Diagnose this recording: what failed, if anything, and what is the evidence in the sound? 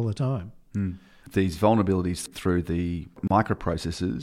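A short silence of about 30 ms cuts into the continuous speech at 3.28 to 3.31 s, with smeared edges, and the sound resumes where it stopped. This is a gap at a join of encoded pieces: separately encoded segments were spliced without trimming each encoder's start delay and final-frame padding.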